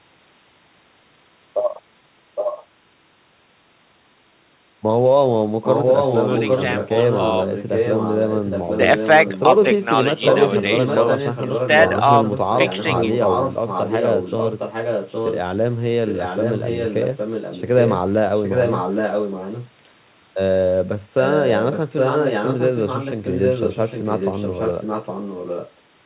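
A delayed second copy of the speech trails the original by about 0.81 s throughout: a brief scrap at 2.35 to 2.65 s and 9.24 to 9.43 s, then longer stretches at 5.64 to 9.08, 10.17 to 12.01, 12.24 to 15.4, 16.07 to 17.97, 18.35 to 19.7 and 21.23 to 25.71 s, mostly around 5 dB under the direct speech. This is echo leak, likely a far-end loudspeaker whose echo canceller let the playback back into its microphone.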